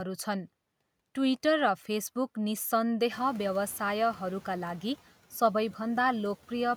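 From 3.11 s to 4.28 s, background noise under the speech bursts through barely reduced, then gradually sinks. This is the noise suppressor catching up: the room noise jumped about 17 dB around 3 s, and the suppressor's estimate needed 1.17 s to adapt.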